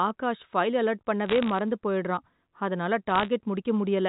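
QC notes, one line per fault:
1.26 to 1.59 s (just after "ஆகாஷ் ஃபைல் அலர்ட்") and 3.10 to 3.28 s, bit errors on a digital phone line: bursts of sharp ticks and crackle over the unchanged speech. A small fraction of a percent of bits flipped on the G.711 A-law line, each corrupting one sample and jolting its value when a sign or high-order bit is hit.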